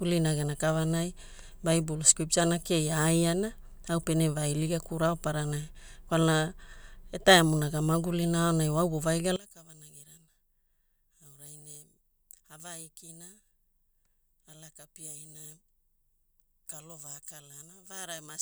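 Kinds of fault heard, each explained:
One channel inverted: from 9.36 s the speech drops about 18 dB, likely a polarity-flipped channel cancelling the shared centre in mono.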